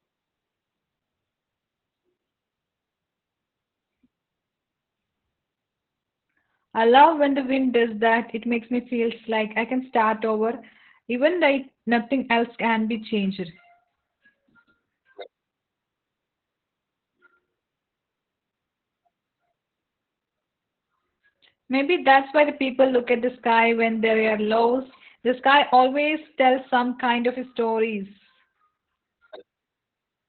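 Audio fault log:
throughout: Opus voice compression. Speech is muffled, hoarse and slightly robotic, which points to SILK coding near 8 kbps. The spectrogram shows a hard ceiling at 4.2 kHz.
23.51–23.60 s: hard clipping. Peaks overdriven by about 4 dB are cut flat just before "when they are lost", producing a crackle. The waveform shows squared-off tops, and the spectrogram shows a brief broadband smear.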